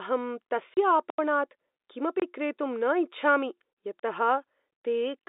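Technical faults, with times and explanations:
0.74 to 0.77 s, packet loss filled with silence: 30 ms of the stream never arrived, which fits three 10 ms packets, and the receiver played silence in their place. The speech drops out abruptly, with hard edges.
1.10 to 1.18 s, 2.20 to 2.22 s and 3.99 to 4.03 s, block of digital silence: runs of samples were replaced by zeros, leaving holes of about 84, 23 and 37 ms. The 23 ms hole fits a 1024-sample buffer. Each cuts to dead silence and back without fading.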